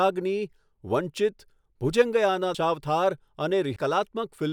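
At 2.54 s and 3.76 s, compressed frames are skipped: the speech jumps ahead by whole 32 ms frames, about 150 ms and 500 ms respectively.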